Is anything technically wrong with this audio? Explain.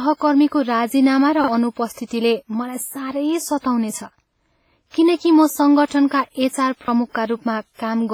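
Yes, two things. The whole speech clip has heavy, washy, ringing coding damage with hiss pumping alongside the voice, likely WMA compression at a low bitrate zeroing weak detail.

There's also a repeated buffer at 1.44 to 1.48 s, just after "राजीनामा र", and again at 6.84 to 6.88 s. A 40 ms chunk replays once with a hard join, which fits a 40 ms buffer being replayed, so you hear a quick stutter.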